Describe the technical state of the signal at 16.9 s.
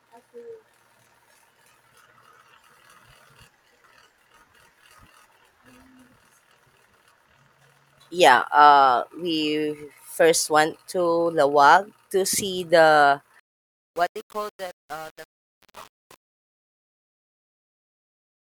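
At 16.9 s the fade-out is running through a gain stage that keeps too few bits and adds no dither, with a coarseness that fits about 7-bit resolution. This is truncation distortion on a fade, lasting from 13.40 s, just after "to see the", to the end at 18.48 s. As the level falls, the waveform collapses into a few square steps, so the quiet tail of the fade sounds gritty.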